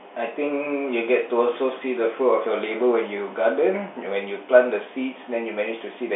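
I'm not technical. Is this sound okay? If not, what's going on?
Yes, no faults here.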